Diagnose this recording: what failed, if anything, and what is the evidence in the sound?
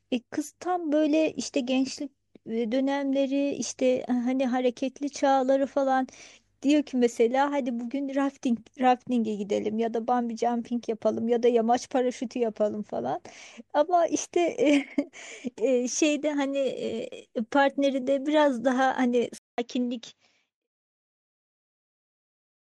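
Driver stage: after a 200 ms gap at 19.38 s, the spectrogram cuts off at 7.6 kHz over faint new noise, likely an input switched to a poorer device.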